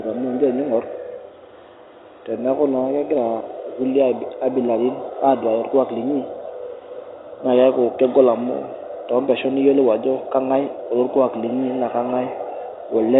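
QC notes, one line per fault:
No faults found in the speech; the telephone band tops out near 4 kHz with only a faint level-following noise floor, consistent with G.711 A-law coding.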